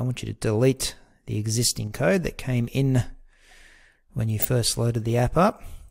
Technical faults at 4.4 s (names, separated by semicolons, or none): DAB burbling